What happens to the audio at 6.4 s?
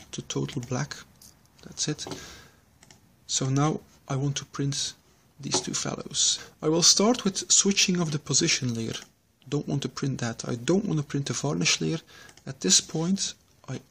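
A brief, harsh blip cuts through the sound at 6.37 s. This is damaged data in a compressed stream: some data there is corrupt, so the decoder misreads the affected frame, loses sync, and jumps to the next valid frame header.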